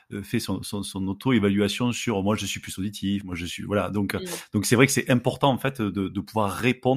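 At 3.21 s, right after "je suis plus auditif", a sudden gain jump drops the speech by about 6 dB, lasting until 3.32 s before "je suis voilà". The background noise falls with it instantly, unlike a fade or compressor action, pointing to a gain setting likely applied without a ramp.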